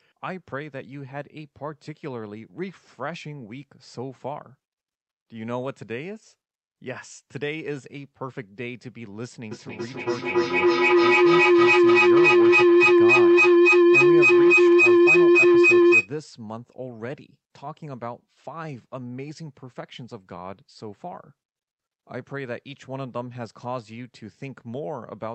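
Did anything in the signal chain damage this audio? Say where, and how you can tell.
Yes. A feedback howl, an acoustic loop between two call devices, runs from 9.51 to 16.12 s: a tone around 400 Hz climbs to about 16 dB above the speech, pulsing roughly every 300 ms. Unlike steady hum, it grows with each trip around the loop.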